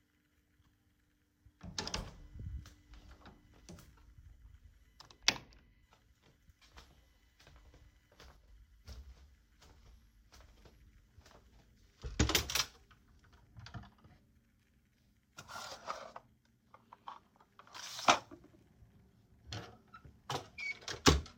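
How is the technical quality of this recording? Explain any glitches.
One glitch stands out. From 8.37 to 8.48 s the level drops abruptly by about 6 dB, likely a channel dropping out before the mono sum, showing as a brief step-down in waveform amplitude.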